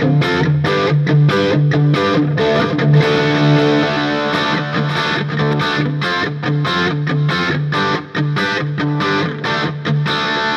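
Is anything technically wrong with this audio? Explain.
Yes. A doubled audio track runs from 2.55 s to 5.53 s. During that stretch a second copy of the sound plays about half a second behind the first. It sits roughly 5 dB quieter and covers the full frequency range. It has no decay or room colour, so it sounds like a clean repeat, not a reflection. It cuts in and out abruptly at both ends. The likely cause is the same signal reaching the mix twice, once through a slower path.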